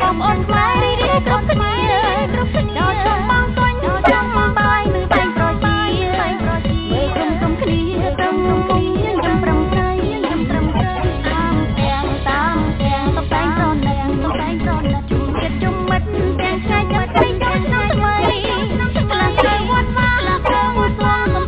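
Throughout, a doubled audio track: a full-band copy about 5 dB quieter trails about a second behind, likely from slower recapture; spectrograms show every event twice.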